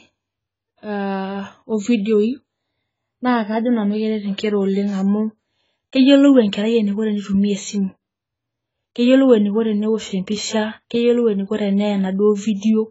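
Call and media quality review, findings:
Dull, band-limited speech throughout, with nothing above 7.7 kHz. Sibilants smeared and fizzy, warbling texture on sustained vowels, heavy codec damage. Likely AAC compression (AAC-LC) at a starved rate, consistent with about 16 kbps. Encoder drops the cut-off and quantises remaining bands coarsely, leaving spectral holes or noise-filled bands.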